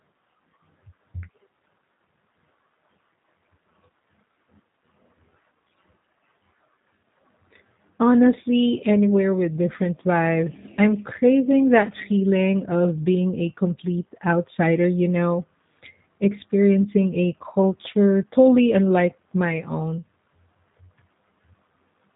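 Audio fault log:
throughout, G.729 codec. The speech has been squeezed through a low-rate VoIP coder, and the damage is plain to hear. Nothing survives above 4 kHz, so consonants lose their edge and the sound turns narrow and boxed. The coder rebuilds each short frame from a vocal tract model, a pitch predictor and a few pulses. That thin excitation leaves the speech rough and slightly synthetic. The overall quality points to a G.729A stream at around 8 kbit/s.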